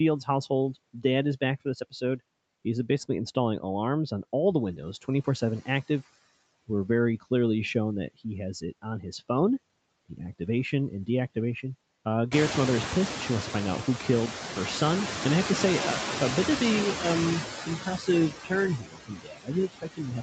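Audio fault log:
Throughout, noise suppressor artifacts: background is pulled down by about 19 dB between phrases and creeps back under speech, as bands are lowered frame by frame.
1.6–2.21 s, 9.01–9.3 s, 17.66–18.08 s, 18.31–18.52 s, 18.79 s to the end, speech cut by the noise suppressor: the suppressor mistook quiet bits of speech for noise and ducked them by about 10 to 21 dB, so they sound swallowed or faint. It's worst at 1.6 s and in the final stretch, the latter coming after the room noise has jumped up at about 12.5 s.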